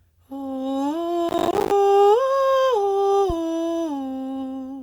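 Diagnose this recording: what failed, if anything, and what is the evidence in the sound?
At the driver and buffer stage, the processor fell behind and missed a long run of buffer deadlines, a processor overload crackle. From 1.29 to 1.71 s the music tears into gritty crackle as dozens of buffers, apparently around 10 ms each, drop to silence with hard edges.

In the analogue wiring, a supply step reached a live input through its coupling capacitors, a phantom power thump. At 3.30 s a low thump cuts into the music, decaying in about 12 ms and gone by 3.35 s.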